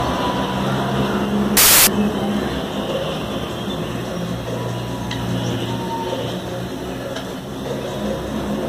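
From 1.57 to 1.87 s the audio collapses into loud, harsh broadband noise, a case of samples built from the wrong bytes. For those 0.3 s each sample is assembled from misordered or misaligned bytes, so the rapidly changing low bits dominate the values and the original signal is buried under broadband hiss.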